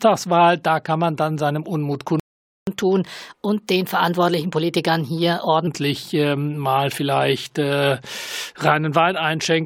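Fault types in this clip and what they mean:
playback stall: The player likely ran out of data or was blocked, so the speech drops to silence for 475 ms, from 2.20 to 2.67 s.
catch-up at higher speed: The player resamples its backlog at 1.15 times speed to regain lost time, so speech runs fast and about two semitones high from 2.67 to 5.67 s.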